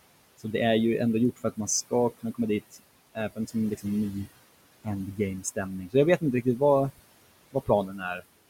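Noise suppressor artifacts run through the whole recording. The suppressor pulls each band it judges to be steady noise down by about 20 dB, frame by frame. The room noise, sitting about 16 dB under the speech, drains away between phrases and swells back beneath them.

Speech cut by the noise suppressor happens four times: 1.36 to 2.39 s, 3.15 to 3.85 s, 4.84 to 6.61 s and 7.53 to 8.24 s. The suppressor mistakes soft parts of the speech for noise and dips them by about 20, 15, 17 and 17 dB. Brief fragments, adding up to roughly 150, 200, 300 and 300 ms in the four spans, sound swallowed and faint.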